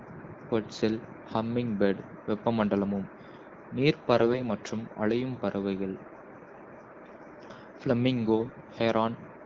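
From 4.14 to 4.43 s, just before "மற்றும் அலையும் பறவைகள்", and from 8.38 to 8.51 s, AMR bit errors flip a few percent of frame bits. Misplaced excitation pulses make the speech gargly and scratchy at steady pitch and level. A spectrogram shows smeared, noisy harmonics, and the waveform looks ragged.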